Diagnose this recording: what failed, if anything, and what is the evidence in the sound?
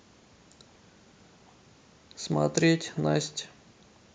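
Nothing failed in this recording, and the sound offers no evidence of a fault at any stage.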